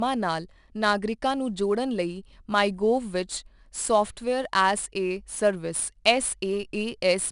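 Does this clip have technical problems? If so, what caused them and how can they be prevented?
Yes. Throughout the speech there is 4-bit ADPCM compression damage: a gritty hiss riding on every louder syllable and roughness on sharp onsets, where the coarse adaptive step size lags the signal. Nothing is present above 10.6 kHz, which fits a sample rate near 22 kHz and a stream of roughly 89 kbps. On a spectrogram, broadband noise fills in beneath the speech energy and rises and falls with it, and a flat ceiling sits at 10.6 kHz. To prevent it, record and deliver with linear PCM or a modern perceptual codec at a full sample rate instead of 4-bit ADPCM.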